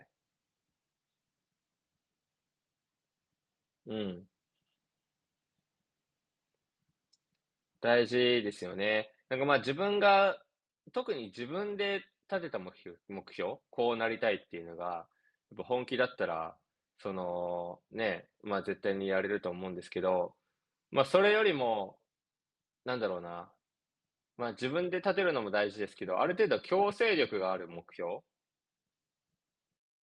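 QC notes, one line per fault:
No faults found in this clip.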